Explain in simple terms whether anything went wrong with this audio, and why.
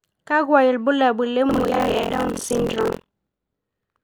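Buffer tearing starts at 1.49 s and runs to the end of the clip. The program filling the audio buffer and the hardware playing it fell out of step, so each chunk mixes in a slice, roughly a third, of speech from a moment earlier, joined on abruptly. Those repeated hard seams make a steady robotic buzz at about 43 Hz, which fits a 1024-sample buffer, and it rides along whenever the speech is sounding.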